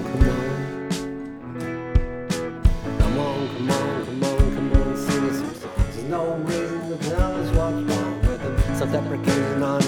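Channel delay (comb filtering) appears from 5.58 to 8.69 s. One channel arrives roughly 20 ms behind the other, and when the two combine in mono, their shared content cancels at evenly spaced frequencies starting near 30 Hz, leaving the sound rough and slightly doubled.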